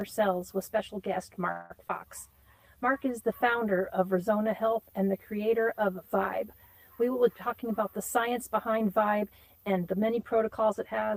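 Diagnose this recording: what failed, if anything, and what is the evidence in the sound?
Driver or buffer stage: one channel runs roughly 10 ms late and the two are summed to mono, so the channel delay (comb filtering) gives a hollow tone. On a spectrogram it shows as fixed horizontal notches starting near 50 Hz.

Network stage: at 1.51–1.72 s a call audio freeze stretches the last sound into a fading buzz or hiss for 187 ms, with no dropout. The likely cause is delayed packets. The waveform shows a smooth decaying tail, and then the audio resumes intact.

Network stage: at 1.88–1.91 s, short concealed packet loss drops 40 ms of audio, patched with 12 ms of continued sound. It is heard as a brief smear, and a spectrogram shows a blurred seam.

Call processing, jitter buffer: from 7.48 to 10.17 s a jitter buffer speed-up runs the audio at 107% speed and unchanged pitch, cutting about 200 ms. 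It sounds hurried, and the waveform shows whole pitch periods cut out.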